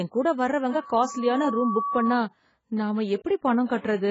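Throughout, the speech sounds dull and smeared, with nothing above 7.6 kHz. The likely cause is heavy AAC compression, which fits a bitrate near 16 kbps. From 0.70 to 2.23 s, a loudspeaker feedback squeal appears. A 1.1 kHz tone swells over about a second, reaching roughly the speech level.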